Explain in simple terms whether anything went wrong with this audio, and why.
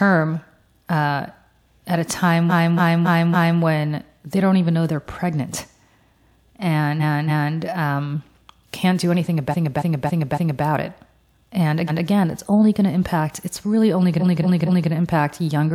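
Repeated frames: at 2.49, 6.99, 9.50 (after "um can't do anything"), 11.87 and 14.19 s, a fifth- to nearly three-tenths-second chunk replays whole, stuttering rather than echoing.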